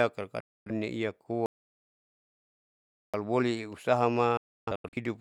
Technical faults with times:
0.40-0.71 digital broadcast dropout
1.46-3.14 audio dropout to silence
4.37-4.97 digital broadcast dropout

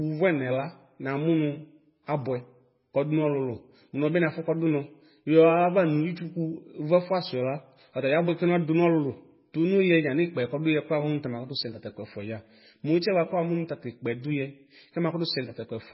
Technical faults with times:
0.00-15.94 MP3 compression

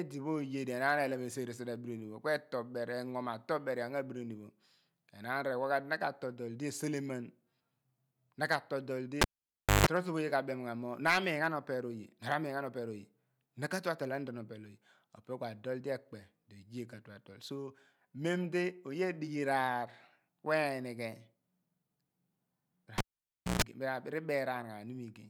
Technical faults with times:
9.21-9.86 cable pulled and plugged in
22.98-23.62 cable pulled and plugged in

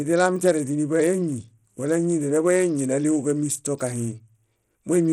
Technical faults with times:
0.00-5.13 Bluetooth SBC compression

